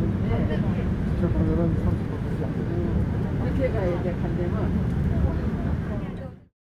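No technical faults are audible in this sound, and the level eases down smoothly from around 5.5 s to silence at 6.54 s in an even fade-out with no click or hard edge at the end.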